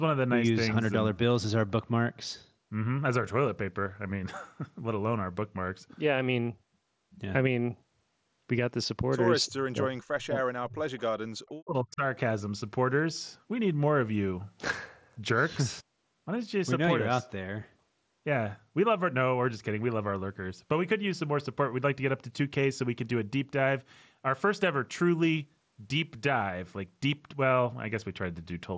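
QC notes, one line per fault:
9.46–10.38 s, 10.62–10.91 s and 11.49–12.02 s, speech suppressed in double talk: the speech sinks by roughly 35 to 40 dB in pieces, likely the echo canceller muting it while both sides talked.
10.97–11.02 s, echo leak: a faint delayed copy about 300 ms behind, around 30 dB under the speech, likely loudspeaker echo the far-end canceller missed.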